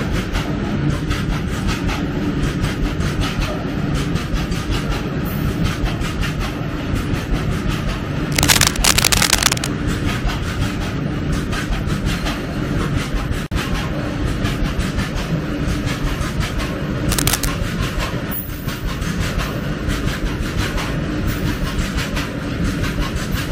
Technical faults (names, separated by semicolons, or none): cable scratch noise; gap at a join of encoded pieces